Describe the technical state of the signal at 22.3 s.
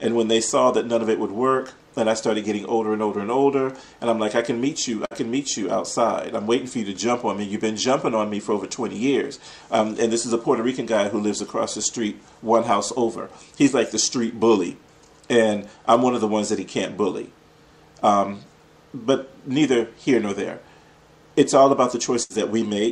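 At 22.3 s the sound stalls: its last fragment is held and stretched for about 70 ms while fading, then resumes further on. This is a burst of packet loss spanning 22.23 to 22.42 s, where the receiver concealed the missing packets by extending and attenuating prior audio.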